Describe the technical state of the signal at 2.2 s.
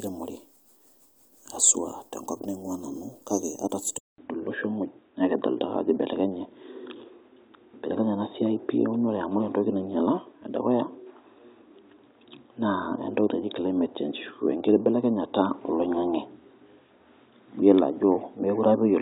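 At 2.2 s the speech signal is intact, with no audible fault at that moment.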